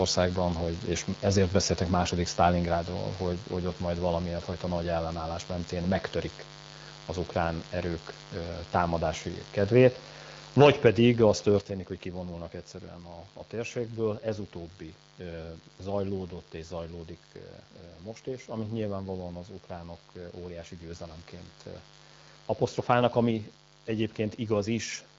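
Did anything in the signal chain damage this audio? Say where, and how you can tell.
Yes.

Mains buzz runs through the whole speech clip, entering in the analogue wiring, likely from an unshielded or poorly grounded connection. It sits about 20 dB below the speech as a steady, raspy buzz. A spectrogram shows a ladder of horizontal lines at multiples of 50 Hz, extending well into the kilohertz range and continuing through pauses.

Microphone overload occurs from 10.6 to 10.87 s, with peaks driven roughly 7 dB past the converter's ceiling, likely because the input gain was set too high. That gives the loudest syllables a harsh crackle. The waveform shows flat-topped peaks on a few percent of samples, and a spectrogram shows broadband smearing on those peaks.

Microphone volume stepped down twice. At 11.61 s the level drops by 6 dB just before "hogy kivonulnak egyszerűen", and at 23.31 s it drops by 3 dB. 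Both are likely call-processing gain control reacting to a microphone it judged too loud. The waveform envelope shows an abrupt step, and the buzz drops along with the speech, which points to input gain rather than anything the talker did. The AMR-WB codec band limit near 7.5 kHz is visible on the spectrogram.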